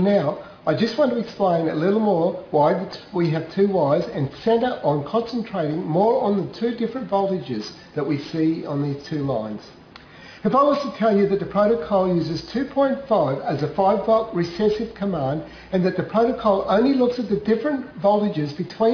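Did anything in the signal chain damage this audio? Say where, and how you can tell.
No, nothing audible points to damage at any stage of the signal chain; the signal holds steady throughout, with no point where the chain shows its hand.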